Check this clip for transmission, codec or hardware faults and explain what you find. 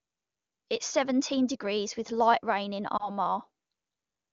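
One transmission fault: lost AMR speech frames from 2.97 to 3.10 s, just after "with light rain in." A corrupted frame failed its checksum, so the decoder repeated the last good pitch and vocal tract settings at falling gain, producing a brief dip or warble, consistent with a single lost 20 ms frame.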